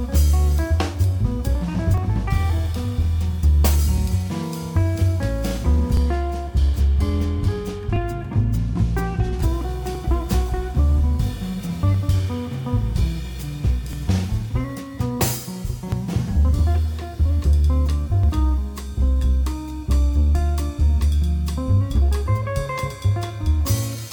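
Overlap between stream segments causes tiny skips at 1.98, 3.98 to 4.00, 5.97, 7.96, 9.95, 11.94, 13.93 and 15.92 s, repeating every 2.0 s. Overlapping segment timestamps make the player discard up to 20 ms of sound, so the waveform jumps.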